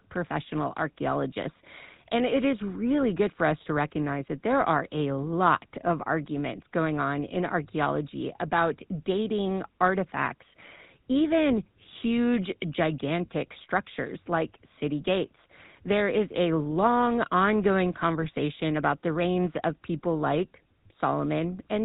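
Throughout, the speech carries GSM full-rate codec damage, plainly audible: a buzzy, gravelly roughness and no content above 4 kHz. The 13 kbps coder rebuilds the voice from a vocal-tract filter fed by sparse, regularly spaced excitation pulses, which discards fine detail and leaves that coarse texture.

From 18.22 to 18.26 s, GSM bit errors break through as a brief squawk and gargle. Corrupted filter, pitch or gain parameters reached the decoder, distorting the spectrum and level for about 44 ms, which fits two consecutive 20 ms frames.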